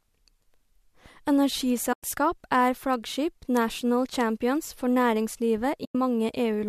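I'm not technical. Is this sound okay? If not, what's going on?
No. The speech has two short dropouts, at 1.93 to 2.03 s (just before "er flaggskip national champions") and at 5.85 to 5.95 s. This is AAC frame loss with muting: about a tenth of a second of audio went missing, and the player filled it with silence that fades out and back in.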